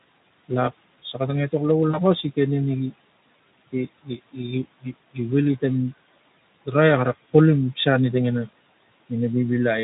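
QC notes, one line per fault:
Throughout: noise suppressor artifacts. The room noise, sitting about 19 dB under the speech, is pulled down by about 19 dB in the pauses and returns beneath each phrase as the suppressor re-estimates it frame by frame.
1.89 to 1.98 s: VoIP packet loss concealed by the speech codec. About 40 ms of audio never arrived, which fits two 20 ms Speex frames. The decoder filled the gap by extending its last pitch and filter at falling gain, producing a brief stretched, fading sound, and the weakened sound lingers for tens of milliseconds after the packets return while the decoder's state recovers.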